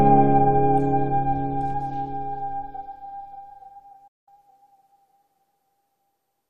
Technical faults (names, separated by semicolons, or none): digital broadcast dropout